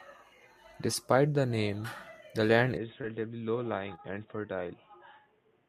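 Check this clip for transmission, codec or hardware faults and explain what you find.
Two faults are present in this speech recording.

Right after "the name the land", at 2.77 s, the sound turns dull and boxy with no gap, losing everything above 3.8 kHz and dropping about 5 dB in level. A faint new noise floor, roughly 40 dB down, runs to the end. The likely cause is an input switched to a poorer device, with a narrower band and its own noise.

Two brief smears follow, at 3.01 to 3.05 s and 3.95 to 4.00 s. These are short concealed packet loss. About 20 ms and 40 ms of audio never arrived, and the receiver extended the preceding sound to bridge each hole before blending back into the real signal.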